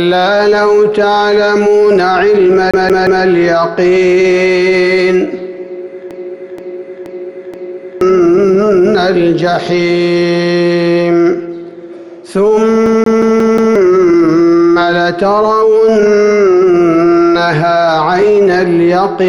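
Three stretches of the audio lock into repetition. From 2.71 to 3.25 s and again from 12.86 to 13.76 s there is a CD stuck on one turn. The same 179 ms fragment plays three times in the first stretch and five times in the second, each pass cut off by a brief mute where the laser jumps back a track at the scratch. The result is a fast, even stutter. On a waveform, identical short blocks sit side by side, separated by tiny flat gaps. A spectrogram shows the same narrow slice of pattern stamped repeatedly, with thin vertical breaks between copies. From 6.11 to 8.01 s a broken-record loop takes over. A longer 476 ms piece repeats exactly four times back to back with no gaps, and the audio that belonged in those two seconds never arrives. This is likely the player or stream stalling and resending its last buffered fragment. The spectrogram shows a wider block copied seamlessly end to end, and the waveform repeats its envelope with perfect regularity.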